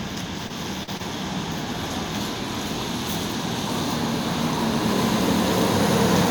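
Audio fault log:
0.47–0.51 s, 0.83–0.89 s and 0.97–1.01 s: short concealed packet loss. About 20 ms, 40 ms and 20 ms of audio failed to arrive in time, and the receiver filled each hole by extending the preceding sound before blending back into the real signal. Each one is a brief smear or wobble, not silence. That continuation, without a dead gap or hard click, distinguishes it from a plain dropout or a splice.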